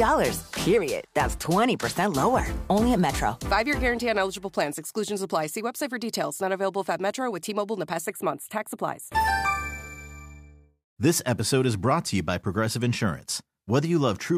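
From 8.06 to 9.15 s the sound turns hollow and phasey, with a fixed notch near 5 kHz and further ones spaced evenly above it. This is channel delay (comb filtering): one channel lagging by about a tenth of a millisecond, a few samples, before the mono sum.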